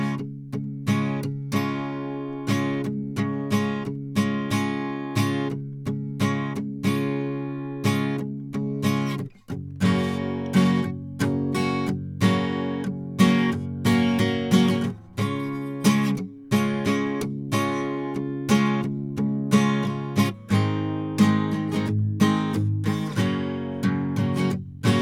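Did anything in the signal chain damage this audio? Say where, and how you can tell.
No, nothing in the chain audibly damaged this music.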